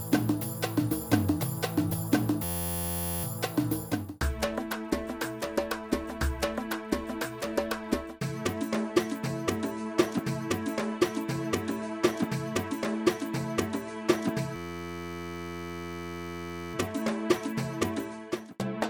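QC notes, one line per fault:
2.44–3.24 s and 14.56–16.74 s, system hang loop: playback stalls and one 11.61 ms slice repeats exactly, which fits a 512-sample buffer, so it sounds like a steady 86.1 Hz buzz. The waveform shows identical repeating cycles; the spectrogram shows evenly spaced lines at 86.1 Hz multiples.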